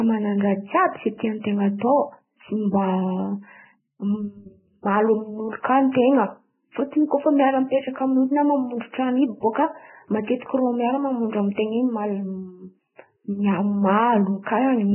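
Heavy lossy coding, likely Vorbis compression at a very low bitrate near 9 kbps, strips everything above 3 kHz, leaving this speech hissy, grainy and dull throughout.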